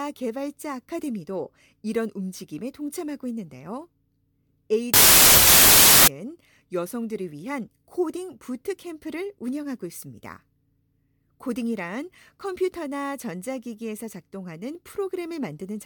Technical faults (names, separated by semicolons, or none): wrong sample width